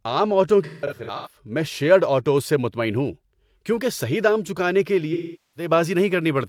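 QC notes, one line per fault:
0.65–1.36 s: AAC frame loss with concealment, after "عام آٹوؤں"; about 384 ms of dropouts scattered, longest around 150 ms, refilled from prior spectrum, sounding smeared and noisy before "میں شیٔرڈ آٹوز سے".
5.13–5.71 s: AAC frame loss with concealment following "صحیح دام چکانے کے"; about 427 ms lost, the decoder repeating old spectral content, giving a phasey, blurred patch.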